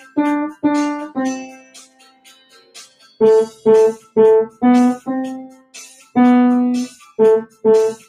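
A speech-tuned noise suppressor applied to music or sounds runs through the whole clip. It mistakes steady tones and decaying tails for noise, so the level swings by around 10 dB. Attacks mostly pass while sustained parts sink, giving a pumping, thinned character. A compressor would duck after loud attacks instead.

Sound cut by the noise suppressor appears at 0.00–0.17 s (about 12 dB down), 1.46–3.16 s (about 16 dB), 3.99–4.16 s (about 16 dB) and 5.48–6.16 s (about 18 dB). Held and fading material sinks or has its decay chopped. The sound is never fully silenced, which separates this from a dropout.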